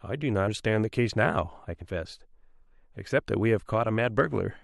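Speech clip, and at 0.47 s there's a jump from compressed frames being skipped: roughly 150 ms of audio just goes missing, which fits a handful of dropped 23.2 ms frames.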